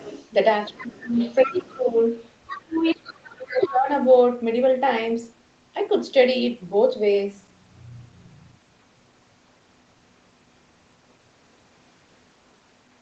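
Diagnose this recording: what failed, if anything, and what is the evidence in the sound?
Call processing, first off: the other side's voice leaking through. You can hear a faint second voice at 0 to 0.29 s, 0.64 to 2.02 s, 2.47 to 2.95 s and 3.47 to 3.68 s. It sits roughly 20 dB under the talker, closer to 15 dB around 2.5 s. That's likely the echo canceller letting loudspeaker playback slip into the mic.

Same stage, second problem: speech suppressed in double talk. From 0.71 to 1.97 s and 2.63 to 3.9 s the talker ducks while the far side is talking, by about 20 dB and then about 25 dB at worst. Each stretch covers roughly a second in total. The canceller likely couldn't separate the talker from the echo, so it turned both down.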